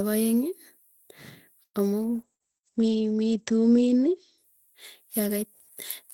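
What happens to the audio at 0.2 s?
Nothing goes wrong at 0.2 s: the speech there plays through intact, with no dropout, click, distortion or other fault.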